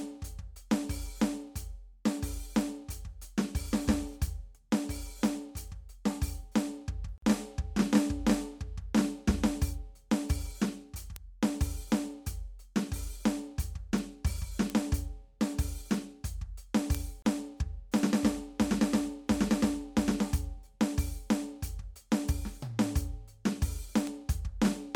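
At 7.18 to 7.22 s the music drops into a silence of about 45 ms, and a second one of 31 ms follows at 17.22 to 17.25 s. Each is a gap at a join of encoded pieces. The joins fall 10 s apart, which fits pieces encoded separately and joined untrimmed, so each piece's start-up delay and last-frame padding remain. Unlike a dropout, the music resumes exactly where it stopped, with smeared edges.

Bit error spikes occur at 11.16, 13.98, 14.70, 16.95 and 24.07 s. Each is a single sharp broadband tick unrelated to the music. A flipped bit makes one sample (three at 24.07 s) jump by a power of two and snap back. No sound is missing here, which separates these ticks from the gaps.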